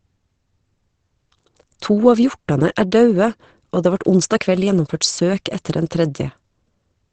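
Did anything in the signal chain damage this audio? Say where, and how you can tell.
Yes. Opus compression runs throughout the clip, likely at the codec stage. The speech sounds muffled and hoarse, with nothing above 8.6 kHz. That narrowed band and rough texture point to Opus's SILK speech mode, and the damage fits a low bitrate of around 16 kbps.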